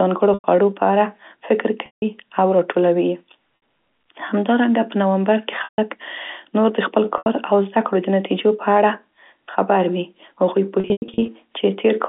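Brief held, buzzy sustains, fading into silence in the longer gaps, replace the speech at 0.34–0.44 s, just before "په اړه فکر", and at 1.86–2.02 s, right after it, then at 3.56–3.62 s, 5.64–5.78 s and 7.18–7.26 s. After "خبر وي هغوی", 10.8–11.28 s is broken up by scattered losses. This is packet loss with pitch repetition. The receiver looped the last pitch period across gaps of 60–160 ms, which fits 20 ms packets. At the end, about 260 ms went missing in runs of up to 100 ms, heard through the narrow G.711 telephone band.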